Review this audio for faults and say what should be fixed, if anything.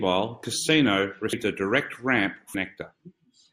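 Compressed frames are skipped at 0.43, 1.33 and 2.54 s. The speech jumps ahead by roughly half a second at the first and third points and about 300 ms at the second, where whole 32 ms frames were dropped. Verify file integrity and use error-protected transport so damaged or missing frames cannot reach the decoder.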